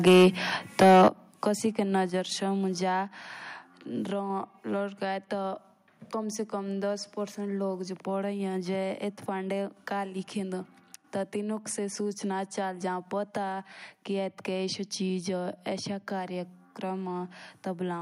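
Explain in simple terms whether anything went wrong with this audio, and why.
Right at the start the speech is too hot. From 0.06 to 0.28 s and again from 0.81 to 1.08 s you get microphone overload: the loudest bits crackle and sound harsh. That's likely because the mic input was set so high that the peaks ran past the maximum the converter could handle, so their tops got sliced flat. In that first burst a large share of the sound is being flattened.

Then there's the fix kicking in, microphone volume stepped down. At 0.08, 1.08, 2.1 and 3.12 s the whole sound, background included, suddenly drops quieter, like someone turning a volume knob. The likely cause is the call software noticing the distortion and turning the mic input down in steps. The drop at 1.08 s, right as the second distorted stretch ends, is the biggest and most noticeable one.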